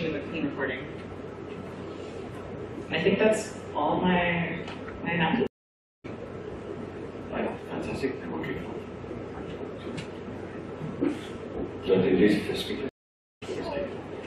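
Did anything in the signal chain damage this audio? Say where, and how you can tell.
Yes. Stream reconnect, network stage, at 5.47–6.06 s and 12.89–13.43 s: the connection dropped, silence followed, and a restarted decoder resumed roughly half a second further on.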